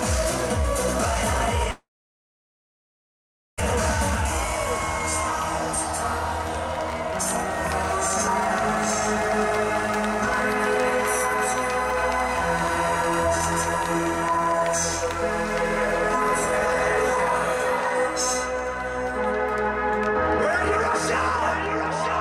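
A likely long network dropout hit this audio from 1.71 to 3.62 s. With nothing arriving, the receiver briefly continued the last sound and then went silent for about 1.7 s. When the audio resumes, roughly a second of material is simply gone. A jitter buffer speed-up follows at 14.32 to 14.61 s, where the receiver trims an overfull buffer by cutting short pitch-period slices, around 70 ms in total. That stretch plays at 124% speed with unchanged pitch, so it sounds clearly hurried.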